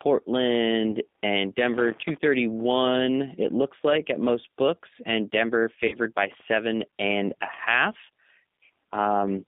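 Speech that's gone through a G.729 codec the whole way. The band sits at roughly 200 Hz to 3.6 kHz, so there's no air or sibilance on top, and the plainly audible roughness and slightly synthetic edge fit an 8 kbit/s coder. It's rebuilding the voice from a vocal tract filter, a pitch predictor and a few pulses per frame rather than sending the waveform itself. There's also VoIP packet loss concealed by the speech codec, twice. From 0.91 to 0.94 s, about 20 ms is missing, which sounds like one lost packet. From 5.88 to 5.97 s, about 40 ms is gone, more like two in a row. In both spots the decoder stretches the last pitch and filter into a short buzzy tone or coloured noise that fades, and because each frame builds on the one before, the voice stays a bit weak or smeared for a moment after the packets come back.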